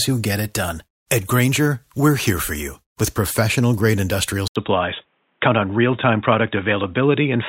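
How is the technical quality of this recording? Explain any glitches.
The quality drops partway through. At 4.48 s the speech cuts out for 80 ms, then returns sounding dull and boxy through to the end. This is most likely an input switched to a poorer device, such as a second microphone or a headset's call profile. The new path passes nothing above 3.8 kHz, so the upper detail of the speech vanishes. A faint new background noise appears, roughly 50 dB below the speech. The loudness stays about the same.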